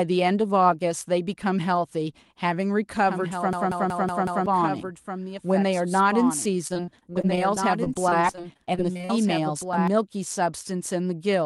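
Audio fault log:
3.06–9.88 s, doubled audio track: A second capture path or an out-of-step edit likely laid the speech down twice, so a full-band copy about 5 dB quieter trails roughly a second and a half behind. It has no decay or room colour, and it starts and stops abruptly.
3.53–4.46 s, system hang loop: The system froze while the sound hardware kept replaying its ring buffer. A 186 ms piece, which fits an 8192-sample buffer, repeats exactly five times at 5.4 Hz, a machine-gun stutter that replaces about a second of audio.
6.67–9.11 s, repeated packet loss (robotic sound): Packets went missing about two dozen times in quick succession. Each hole, 40 ms at most, was patched by extending the preceding sound, which covers 461 ms in all, or 19% of the stretch. A further 480 ms simply drops out, leaving choppy speech.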